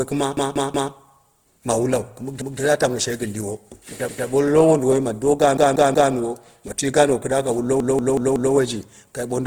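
Throughout the clip the speech is grainy and rough, with a noisy edge on voiced sounds. This is plainly audible Opus compression, likely from its music (CELT) mode at a low rate near 16 kbps. Band energy is kept but filled with noise, and content reaches about 20.2 kHz.

A repeated buffer, a stutter with hard joins, occurs at 0.37–0.93 s (three extra plays), 2.42–2.60 s (one), 4.09–4.27 s (one), 5.57–6.13 s (three) and 7.80–8.55 s (four). The device replayed a roughly 186 ms piece, which fits an 8192-sample buffer.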